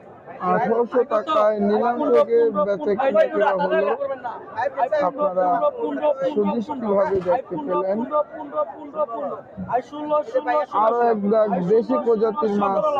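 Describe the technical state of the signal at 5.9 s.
At 5.9 s the noise suppressor applied to music or sounds is active, as it is across the whole clip. Treating sustained tone and ambience as noise, it ducks them by around 10 dB after each attack, so the sound pumps. Waveforms show envelopes collapsing after onsets; spectrograms show thinned, fluttering sustained partials.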